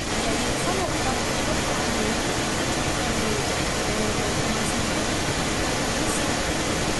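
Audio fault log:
Throughout: echo leak. A delayed copy of the speech trails it by about 270 ms, and it arrives about 5 dB louder than the original. The likely cause is a far-end loudspeaker whose echo canceller let its microphone pickup return down the line. Unlike room reverberation, which fades smoothly, this is a distinct repeat at one fixed lag.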